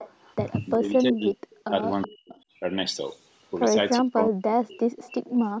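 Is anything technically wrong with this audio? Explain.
Yes. There are two related faults, both pointing to a speakerphone echo canceller that is struggling.

Echo leak, at 0.00 to 0.53 s, 1.54 to 1.71 s, 2.02 to 2.08 s, 2.31 to 2.41 s and 4.96 to 5.20 s: the far end's canceller likely let loudspeaker pickup slip back into the call. The result is a faint copy of the speech trailing 374 ms behind, roughly 15 to 25 dB below it.

Speech suppressed in double talk, at 0.76 to 1.72 s, 2.03 to 2.34 s and 4.00 to 4.78 s: with both sides talking together, the canceller couldn't separate the talker from the echo and clamped down on both. The speech drops sharply, by up to about 40 dB, with affected stretches totalling roughly 0.7 s, 0.3 s and 0.7 s.

The missing content above 8 kHz comes from the call's microphone processing.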